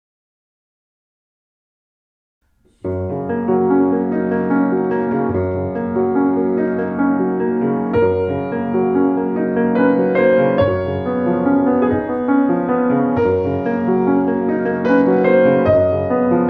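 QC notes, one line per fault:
3.61–6.94 s and 13.16–15.24 s, Bluetooth SBC bit pool drop: treble goes dull and gritty as the link starves top sub-bands, which fits the bit pool falling to about 9.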